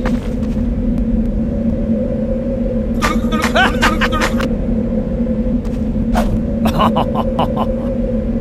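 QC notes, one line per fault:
No fault found.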